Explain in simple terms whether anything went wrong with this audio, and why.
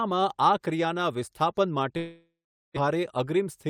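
Right after "ક્રિયાનાં વિસ્થાપન", at about 1.97 s, the speech breaks off until about 2.78 s. This is most likely a long network dropout: roughly 600 ms of audio never arrived. The receiver papered over the gap by stretching the last bit of sound into a buzzy hiss that fades, and about 420 ms of it is just silence. When the speech comes back, the missing piece is simply gone.

Right after that, from about 2.88 s to 3.68 s, you get a jitter buffer speed-up. After the gap, the receiver was holding extra audio, roughly 150 ms more delay than it wants. To catch up, it snipped out lots of tiny slices, around 50 ms in total, so the speech plays about 6% faster. The pitch stays the same, but that last stretch sounds a bit rushed.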